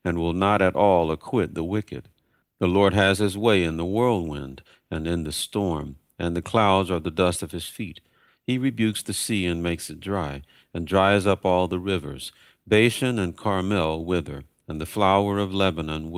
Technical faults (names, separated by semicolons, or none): none